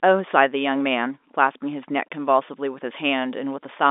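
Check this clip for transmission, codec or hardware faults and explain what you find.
No transmission, codec or hardware faults are audible in this speech; it carries the normal G.711 telephone coding, with the line band running from about 250 Hz to 3.6 kHz and nothing present above 3.8 kHz.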